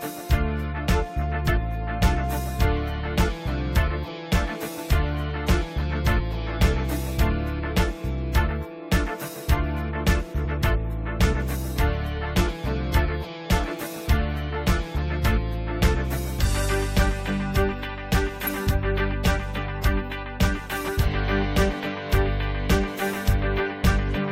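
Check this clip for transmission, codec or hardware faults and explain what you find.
The clip has three short glitches from damaged data in a compressed stream, at about 1.48 s, 6.19 to 6.21 s, and 18.47 s. At each point, bytes in the encoded file were missing or corrupted, so the decoder could not interpret those frames and had to resync by finding the next valid frame header. Each one lasts only 10 to 20 ms and sounds like a brief chirp or blip cutting into the audio.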